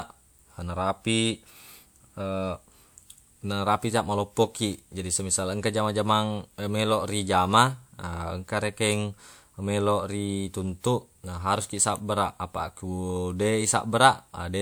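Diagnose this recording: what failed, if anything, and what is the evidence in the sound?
Two sharp snaps sit on top of the speech, a short burst of clicks from 8.90 to 8.93 s and a single tick at 11.96 s, each laid over the speech rather than cutting into it. This is an electrical switching spike, likely from a nearby switch, motor or static discharge arcing and being picked up in the analogue wiring. Unlike a buffer dropout or codec glitch, nothing goes missing; the impulses are simply added on top.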